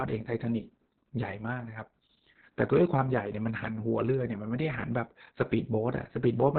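Throughout the speech, Opus voice compression is heavy: nothing reaches above about 4.3 kHz, so the band is narrowband SILK coding. Coarse excitation leaves the speech muffled, hoarse and faintly robotic, which points to a very low bitrate around 6 kbps.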